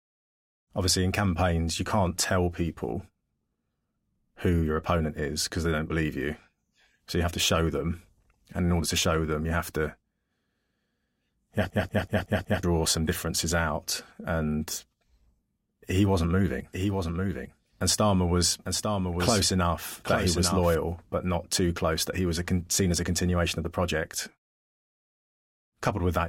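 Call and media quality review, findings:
System hang loop, 11.70–12.63 s, after "you have", before "some differences out". Machine-gun stutter: one 186 ms slice repeats 5 times at 5.38 Hz, fitting an 8192-sample ring buffer replayed during a driver freeze. About a second of audio lost. Waveform shows identical tiled blocks; spectrogram, repeating vertical stripes.

Doubled audio track, 16.73–20.75 s, after "he wasn't moving", before "but not too close". Full-band copy about 5 dB down, trailing by roughly one second, likely from a second, slower capture path. No decay or room colour. Waveform shows a duplicate envelope offset in time. Copy starts and stops abruptly, with hard edges on the spectrogram.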